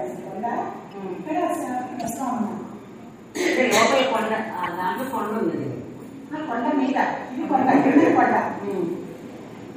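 At 2.0 to 2.1, 4.63 to 4.68 and 6.87 to 6.89 s you get a corrupt frame decoded. Flipped bits got played anyway, so energy lands at wrong frequencies as short chirpy bursts, the middle one clearly loudest.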